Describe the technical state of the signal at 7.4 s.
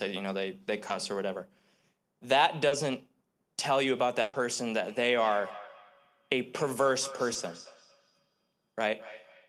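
Around 7.4 s, the speech carries a feedback echo between two devices that runs from 4.85 s to the end of the clip. A second device in the same room is replaying the far side's audio, and the microphone picks that playback up again. The local echo canceller cannot remove sound it did not play itself, so each syllable returns at a fixed interval of about a fifth of a second, peaking about 18 dB below the speech. Unlike room reverberation, which is a smooth diffuse tail, this is a distinct, evenly spaced repeat, and it sounds thinner and more ringing than the original.

Just before that moment, from 7.33 to 7.37 s, there is a short concealed packet loss. A 20 ms piece of audio failed to reach the decoder in time. The receiver filled the gap by extending the preceding sound for 20 ms and then blended back into the real signal, which leaves a brief smear or wobble. It differs from a dropout or clipping click because there is no silent hole and no hard edge, only a momentary blurring of the sound.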